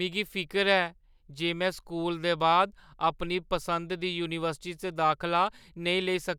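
No technical faults can be heard anywhere in this speech recording.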